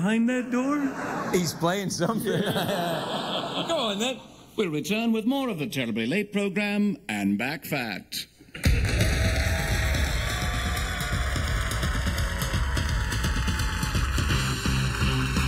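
Throughout the clip, the channels drift apart. Each side seems clocked separately, with an error of a few tens of parts per million. The delay between them slides to under a millisecond. Summed to mono, comb notches sweep slowly, heard as slow flanging.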